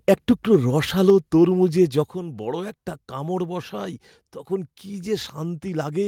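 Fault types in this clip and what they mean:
microphone overload: From 0.1 to 0.55 s and again from 1.08 to 1.1 s the peaks run about 3 dB past the converter's limit, likely from excessive input gain. The waveform shows flat-topped plateaus, sparse at first and dense later. On a spectrogram, broadband smear spreads above the harmonics.
microphone volume stepped down: Voice and background drop together at 1.1 s by about 4 dB, then at 2.1 s by about 6 dB, likely automatic input-gain cuts, the first following the clipped peak. The waveform envelope shrinks in clean steps, and the spectrogram darkens evenly across all frequencies.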